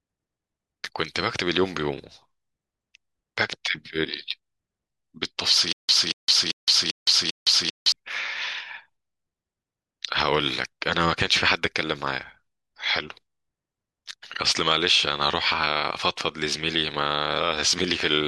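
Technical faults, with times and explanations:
5.73 to 7.92 s, stutter with silent gaps: a 232 ms fragment of the speech repeats five times, each followed by 163 ms of digital silence, a steady 395 ms cycle. This is likely a stalled stream replaying its last buffer at each retry, so the intervening audio is lost.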